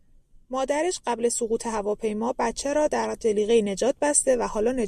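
No faults can be heard anywhere in this speech recording.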